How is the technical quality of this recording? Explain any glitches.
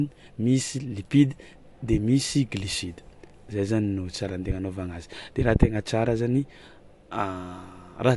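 Quality is noticeably degraded by MP3 compression throughout. The encoder likely ran short of bits, at a rate that fits roughly 52 kbps. It cut everything above 11.2 kHz and let weak frequency lines flicker between frames, so the speech sounds dull, plainly watery and swirly, with metallic chirps on s sounds and smeared attacks.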